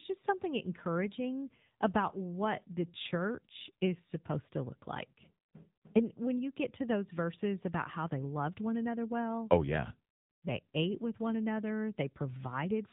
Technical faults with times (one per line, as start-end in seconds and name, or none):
0.00-12.92 AMR narrowband mobile codec